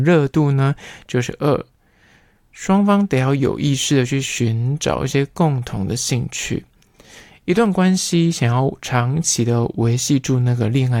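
Two clocks that likely disagree by something like 70 ppm let a buffer drift until a handful of samples is dropped or repeated. These clock drift buffer slips produce clicks in the speech every 2.75 s, from 2.14 s to 10.41 s.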